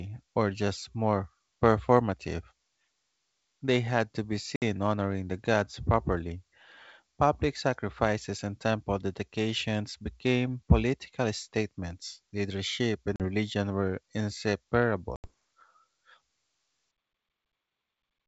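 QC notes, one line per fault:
4.56–4.63 s, 13.16–13.22 s, 15.16–15.30 s: packet loss on an ADPCM call. Holes of 60, 40 and 80 ms (first after "had to be", second before "religion were") show as flat silent runs with hard vertical spectrogram edges. Audio returns slightly distorted while the decoder's predictor and step size resync.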